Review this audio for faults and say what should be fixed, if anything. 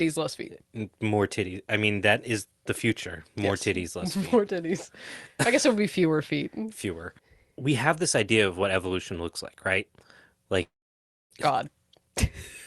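Between 10.62 and 11.32 s there's most likely a long network dropout. About 0.7 s of audio never arrives, the receiver smears the last sound into a fading buzz, then it's near silence until the speech resumes with that chunk missing. Turning on forward error correction or redundancy, plus a bit more jitter-buffer depth, would help ride out gaps like this.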